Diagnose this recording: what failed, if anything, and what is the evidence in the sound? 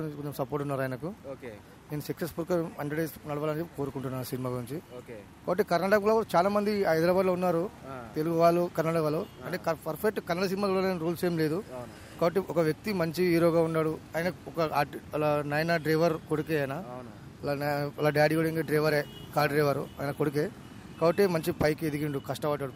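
Clock slip clicks run from 0.16 s to 22.75 s: a faint, regular tick roughly every 70 ms, around three hundred in all, blurring into a soft rattle. The likely cause is a converter or interface stage with two free-running clocks differing by a few hundred ppm, so a single sample is dropped or repeated each time the drift accumulates one sample. A spectrogram shows evenly spaced thin vertical broadband lines, and a zoomed waveform shows one-sample steps.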